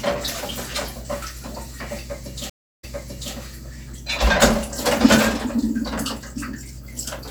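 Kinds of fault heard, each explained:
Stream reconnect: The connection dropped and the player restarted decoding mid-stream. About 0.32 s of silence follows, then the audio resumes roughly 0.52 s earlier, repeating a stretch.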